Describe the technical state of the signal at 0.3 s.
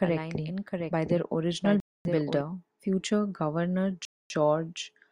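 A second copy of the speech, about 5 dB quieter, trails about 0.7 s behind, dry and full-band: a doubled audio track, running from the start to 2.41 s, likely from a slower capture path mixing in twice.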